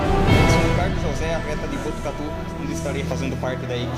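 No technical faults are audible anywhere in the sound.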